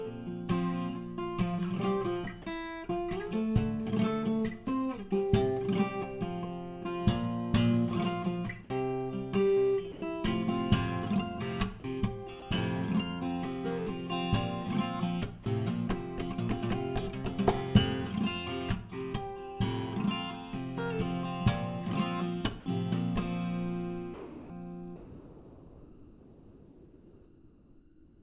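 At 9.92–10.02, 11.80–11.84, 12.40–12.42, 15.44–15.46 and 24.14–24.50 s, the sound cuts to steady hiss for 20 to 360 ms, most likely sound dropped by the voice detector. Unlike packet-loss concealment, nothing is smeared or repeated: the sound simply yields to flat noise, then resumes.

From 24.96 s to the end, the background likely becomes comfort noise in place of the background: a smooth, textureless hiss about 4 dB quieter than before. Real room noise fluctuates and carries detail, and this fill has none.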